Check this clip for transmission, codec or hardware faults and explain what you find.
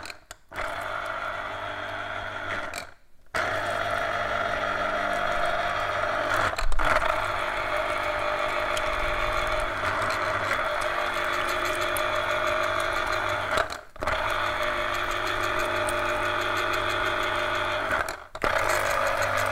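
I found no faults in the clip.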